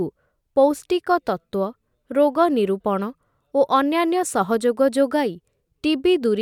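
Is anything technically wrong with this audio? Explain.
No, nothing technically wrong turns up anywhere in this speech recording.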